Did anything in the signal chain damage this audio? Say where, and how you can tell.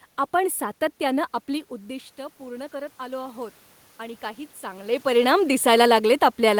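Yes. Automatic gain rising, from 1.47 s to 5.01 s, at the call-processing stage. Around 1.5 s the talker moves away and the level drops by about 15 dB. The automatic gain control then raises its gain by about 8 dB over roughly three and a half seconds. The room noise swells along with the voice, which shows the change comes from processing rather than from the talker. The ramp stops near 5.0 s, when the talker moves again.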